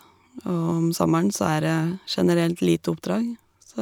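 No faults turn up anywhere in this recording, so there's nothing here to walk through.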